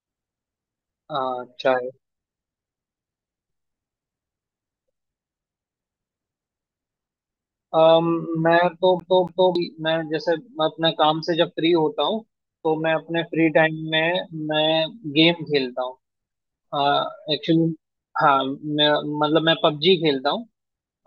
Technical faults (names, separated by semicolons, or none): CD stuck on one turn